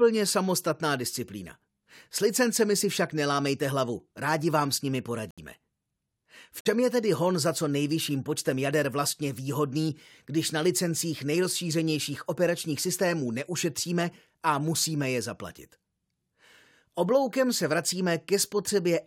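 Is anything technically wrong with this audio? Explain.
Yes. The speech drops out twice, with silent gaps that open abruptly at 5.31 to 5.39 s and again at 6.61 to 6.67 s, about 80 ms and 60 ms long. This is corrupt frame muted. Damaged compressed frames were rejected by the decoder, and the player substituted silence for them. The gap lengths fit a few whole frames lost each time, likely three and then two. Timing is kept, so the speech resumes in place.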